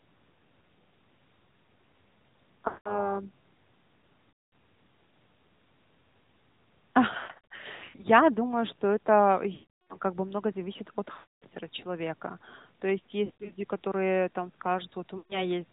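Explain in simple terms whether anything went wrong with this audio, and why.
The speech went through the AMR narrowband mobile codec, an older phone-call coder. It removes everything above 4 kHz, so the voice sounds muffled, buzzy and somewhat synthetic.

There are also lost AMR speech frames. Radio errors spoiled short pieces of the signal. The decoder filled each gap by stretching the last good sound and letting it fade, which causes brief smears, warbles or drop-outs. These happen at 2.68 to 3.16 s, at 4.45 s, and from 7.18 to 8.05 s as scattered short gaps. One comes at 9.54 to 9.98 s, between "думаю что это" and "как бы много зависит", and another at 11.14 to 11.44 s, after "бы много зависит от". There are two more: 13.26 to 13.53 s, just before "которые там", and 15.18 to 15.46 s.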